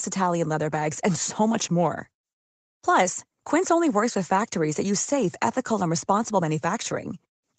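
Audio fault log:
No faults found in this speech; the call microphone processing is audible only as the expected bandwidth limit, with nothing above 8 kHz and the lowest bass trimmed.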